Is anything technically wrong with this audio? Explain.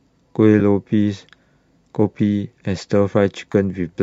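Yes. AAC frame loss with concealment occurs twice in this speech, at 0.6 s and from 3.52 to 3.55 s. When a frame goes missing, the decoder rebuilds the gap from the last good spectrum with randomised signs, so each moment sounds like a brief smeared, noisy blur. The gaps, about 10 ms and 20 ms, fit one and then two lost short frames, and the faint graininess in the voice is likely from light low-delay AAC compression.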